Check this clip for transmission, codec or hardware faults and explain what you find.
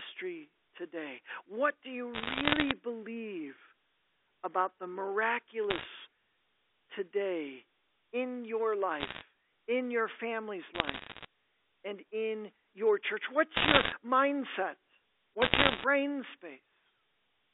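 The clip has one fault, bit errors on a digital phone line, in six bursts.

Bursts of sharp crackle and ticks sit over unchanged speech at 2.14–2.72 s, 5.70–5.86 s, 9.00–9.22 s (after "today in your"), 10.74–11.25 s (after "in your family's"), 13.56–13.92 s (after "and in your church") and 15.42–15.84 s. The 13.56 s burst is the densest. These are bit errors on the G.711 line. Roughly one to three percent of bits flip, and each flip corrupts a single sample. Flips that land on high-order bits, or on the sign of a loud sample, throw that sample far off and produce the clicks. The telephone band around them sounds as narrow as expected.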